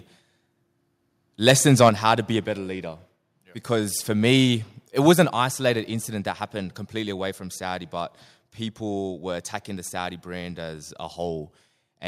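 At 1.48 to 1.52 s the speech hits a harsh, crackling burst. This is microphone overload. The peaks overshoot the ceiling by about 5 dB, and their tops are cut flat. A few percent of the samples there are clipped. The likely cause is an input gain set too high for the converter.

A second overload runs from 1.81 to 2.12 s, ending just before "to be a better". It is milder, about 3 dB over, with a small share of samples flattened. It leaves a gritty edge on the louder syllables.

Inside that stretch, at 1.89 s, the level drops abruptly by about 5 dB. Speech and background fall together. This is a microphone volume step down. The call software likely lowered the input gain in one step after detecting the distorted peaks.

At 5.25 s comes another microphone volume step down, about 4 dB. It falls between "for me it was" and "isolated incident that happened". The drop is sudden, not a fade. That points to the likely cause being a single automatic cut to the device's input volume.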